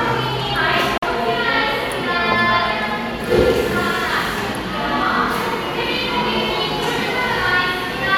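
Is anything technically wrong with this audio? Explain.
Yes. A Bluetooth dropout occurs from 0.98 to 1.04 s. The likely cause is audio packets arriving at the headphones too late and being discarded, leaving the output with nothing to play until fresh packets come through. About 46 ms of audio is lost, which fits two dropped frames. The sound cuts out abruptly into a brief hole of silence, then resumes further along, as though it had kept playing through the gap.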